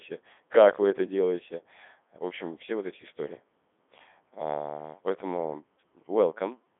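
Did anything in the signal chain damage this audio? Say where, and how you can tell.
Yes, at the codec stage: the whole clip has passed through the Codec 2 vocoder. The decoder rebuilt the speech from a pitch track, voicing decisions, energy and a coarse spectral envelope, discarding the original waveform, so it sounds robotic and buzzy throughout. The heavy smearing and sine-built timbre fit its highest 3.2 kbit/s mode. The band runs from about 250 Hz to 3.6 kHz, with nothing above 3.8 kHz.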